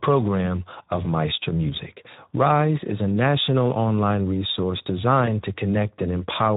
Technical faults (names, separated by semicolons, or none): Speex codec; VoIP packet loss concealed by the speech codec